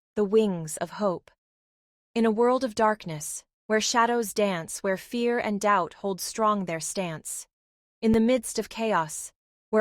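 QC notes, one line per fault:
8.14 s, underrun with held sample: the output buffer briefly ran dry, so the waveform freezes flat for 5 ms. About 5 ms of speech is lost.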